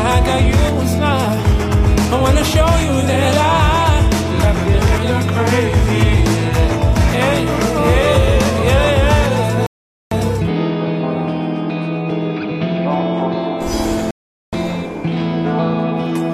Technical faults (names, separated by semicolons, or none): rebuffering stall